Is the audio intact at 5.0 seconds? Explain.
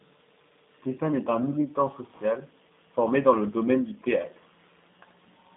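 No. At 5.0 s the speech carries G.729 codec damage, which runs through the whole clip. The codec rebuilds each 10 ms frame from a vocal tract filter, a pitch predictor and a few coded pulses, at a rate that fits 8 kbit/s. The result is narrowband speech in a 200 Hz to 3.7 kHz line band, with nothing above 3.8 kHz, and a plainly rough, synthetic texture. A simple telephone band-pass filter would dull the sound but leave it smooth.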